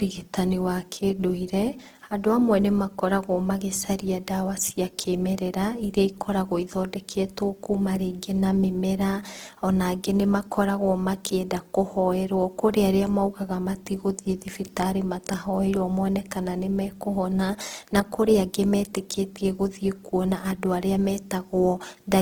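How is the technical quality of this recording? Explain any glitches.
Throughout the speech the quality is held back by a low-bitrate audio saved at a high bitrate problem. The sound has the smeared, watery character of heavy compression, even though the file itself is large. The artefacts fit a first pass through a speech codec at a very low rate, around 16 kbit/s like Opus, that was likely later re-saved as a 256 kbit/s MP3. That second encoding keeps content up to about 20.2 kHz but cannot restore the detail the first codec discarded.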